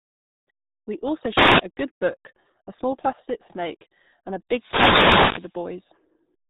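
Right from the start the speech has that RealAudio 14.4 codec sound. Everything is squeezed through an old dial-up speech coder, and the damage is heavy. Nothing gets through above about 3.8 kHz, so the voice sounds boxed-in and muffled, with a gargly, watery texture where the coder rebuilds the speech from a few crude parameters. That degree of mangling fits a bitrate down around 8 kbit/s.

On top of that there are two wireless microphone noise hits. The first runs from about 1.33 to 1.64 s, and the second, longer one from about 4.51 to 5.58 s. In each, the FM radio link from the mic fades out as signal reflections cancel each other, so the receiver's own hiss swells up. You hear it as a sudden swish of static washing over the voice, which then clears again.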